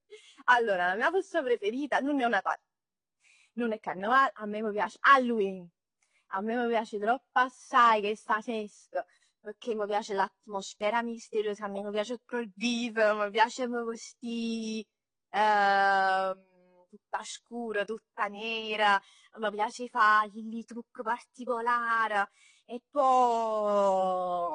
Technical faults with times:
0.00-24.55 AAC compression

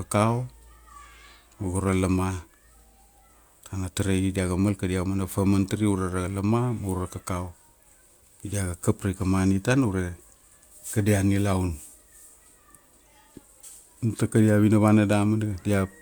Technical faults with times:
none

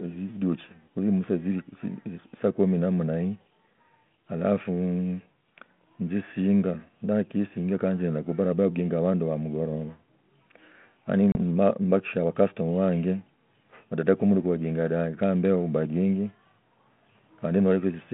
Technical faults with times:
11.32-11.36 packet loss on an ADPCM call

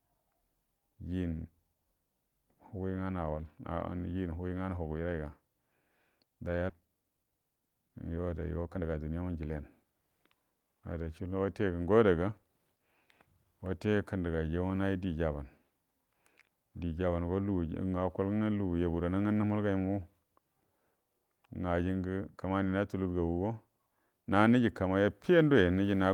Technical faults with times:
6.69 skip ahead
6.81-9.91 jitter buffer speed-up

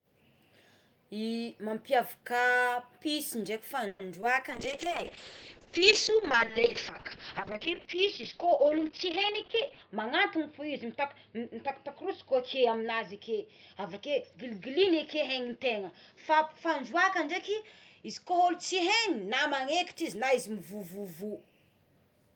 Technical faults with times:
3.87-4.01 call audio freeze
4.21-4.24 short concealed packet loss
4.50-20.01 call bitrate drop
9.32-12.83 jitter buffer speed-up

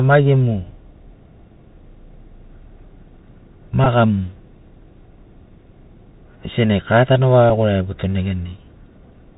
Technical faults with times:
0.00-9.37 Bluetooth CVSD headset codec
3.84-3.87 Bluetooth headset packet repeated
7.50 Bluetooth headset packet repeated

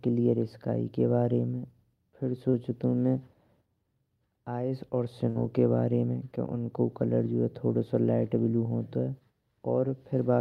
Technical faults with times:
2.49-2.55 short concealed packet loss
5.29-5.37 burst of packet loss

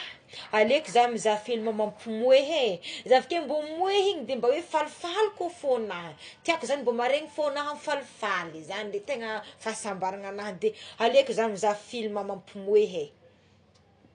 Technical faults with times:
0.00-14.15 AAC compression

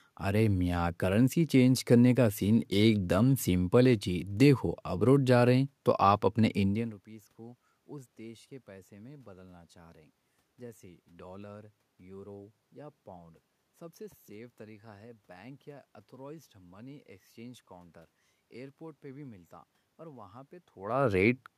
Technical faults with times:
none

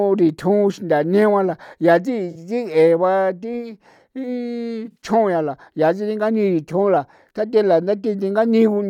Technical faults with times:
2.31-2.37 AAC frame loss with concealment
4.85-4.96 AAC frame loss with concealment

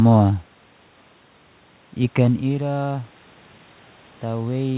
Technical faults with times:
none

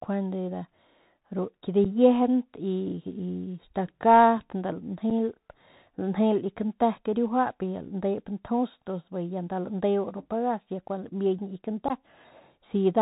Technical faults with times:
0.00-13.01 Bluetooth CVSD headset codec
1.84 unconcealed Bluetooth headset packet loss
5.10 unconcealed Bluetooth headset packet loss
11.88-11.92 unconcealed Bluetooth headset packet loss

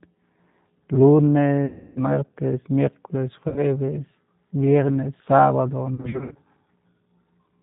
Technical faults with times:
0.00-7.63 G.729 codec
1.66-1.99 VoIP packet loss concealed by the speech codec
3.48-3.64 VoIP packet loss concealed by the speech codec
5.95-6.37 VoIP packet loss concealed by the speech codec

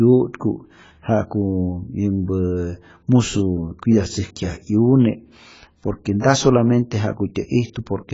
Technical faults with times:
0.00-8.14 AAC compression
6.20-6.24 pre-echo

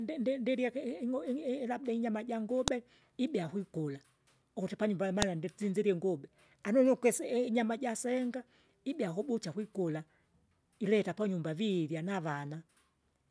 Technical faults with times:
2.68 file header played as audio
5.22 file header played as audio

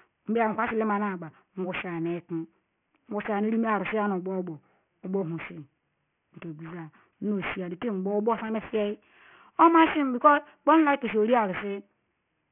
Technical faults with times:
0.00-12.52 aliasing

